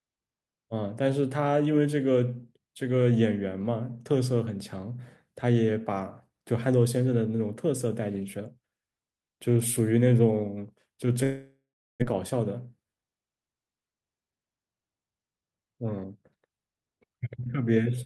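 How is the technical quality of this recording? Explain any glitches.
The recording has two connected glitches, both in the second half of this speech clip.

Long network dropout, 11.23 to 12.04 s: the sound smears into a fading buzz, then goes silent, likely because packets stopped arriving, and resumes with about 0.6 s lost.

Jitter buffer speed-up, 12.15 to 13.75 s: the receiver trims short pitch-period slices to drain the backlog, so speech runs about 10% faster at unchanged pitch, sounding hurried.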